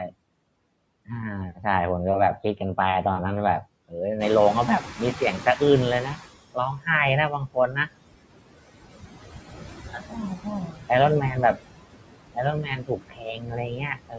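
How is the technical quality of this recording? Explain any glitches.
The recording has three related problems, all from the noise suppressor working against a noisy room.

Noise suppressor artifacts run through the whole clip. The suppressor judges, frame by frame, which frequency bands hold steady noise and lowers them by about 20 dB. The background therefore dips in the gaps between phrases and comes back up underneath the speech.

Speech cut by the noise suppressor happens at 3.63–3.95 s, 4.81–5.61 s, 6.54–6.87 s, 7.3–7.9 s, 9.55–10.9 s, 11.22–11.61 s and 12.35–14.18 s. In each span the suppressor mistakes quieter parts of the speech for noise and turns them down. The drops range from about 10 dB (4.81 s) to about 22 dB (7.3 s). Consonants and endings sound swallowed or faint. The longest loss comes in the final stretch to the end, where well over a second of speech is pushed down.

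Noise suppressor catching up runs from 4.19 to 6.23 s. Around 4 s the room noise jumps by about 14 dB. The suppressor's noise estimate lags behind that jump, so the louder background first comes through with less reduction. Over about 2.04 s it sinks as the estimate adapts, reaching roughly 15 dB of cut. The call's microphone processing band-limits everything to 8 kHz.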